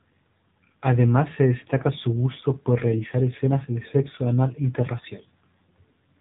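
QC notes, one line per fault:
throughout: AMR narrowband mobile codec. The speech is confined to the telephone band, with nothing audible above 3.8 kHz, because the codec works at 8 kHz sampling. The coding damage is plainly audible as a buzzy, synthetic edge on the voice. The codec rebuilds each 20 ms frame from a vocal-tract model excited by a few pulses, and at this degree of damage the sound points to one of the lower AMR-NB modes, around 7.4 kbps.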